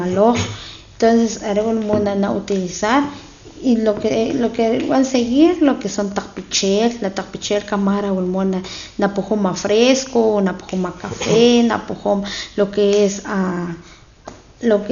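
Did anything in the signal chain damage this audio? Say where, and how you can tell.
Yes, at the codec stage: the speech carries heavy coding damage from start to finish, likely from Dolby Digital compression. Nothing is audible above about 6.9 kHz, so it sounds dull, and a rough, fluttering noise clings to the voiced sounds. That fits a very low bitrate, around 48 kbps. The encoder cut the band short and left many frequency lines with no mantissa bits, and the decoder filled those gaps with dither noise.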